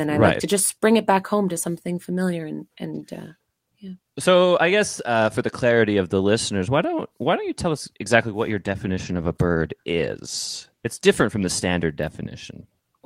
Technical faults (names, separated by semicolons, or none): call bitrate drop